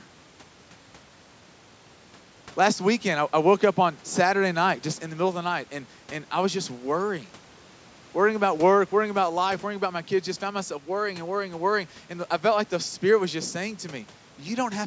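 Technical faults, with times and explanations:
No technical faults were found.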